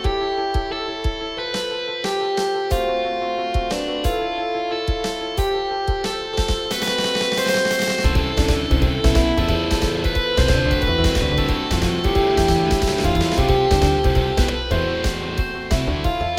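From 6.34 to 14.50 s a doubled audio track appears: an equally loud copy trails about a tenth of a second behind, likely a second capture path, and stops abruptly without the decaying tail an echo leaves.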